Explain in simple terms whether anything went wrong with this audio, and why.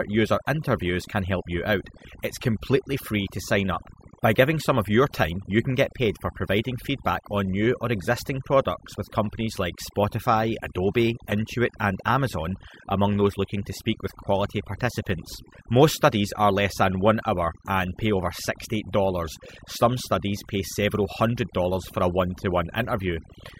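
Two things went wrong, and both run the whole way through the recording.

The first is overdone noise removal. Someone ran a noise reduction tool far too hard on a noisy recording. It shuts down any slice of the sound it thinks looks like background hiss, and the softer parts of the speech get caught too. So the gaps between phrases drop to an unnatural near-silence with little twinkly specks in them.

On top of that there's a swirly, underwater quality from start to finish. That's likely MP3 compression, squeezed hard enough that the damage is plainly audible. When an MP3 encoder is short on data, it lops off the treble and drops faint details that it guesses you won't miss. Those details flicker in and out from moment to moment, which makes the speech swirl and sharp sounds smear.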